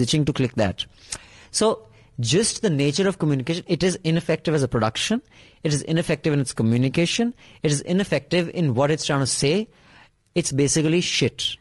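Speech throughout carries plainly audible low-delay AAC compression: a rough, grainy texture with noise seeping between the harmonics, likely AAC-ELD near 32 kbps.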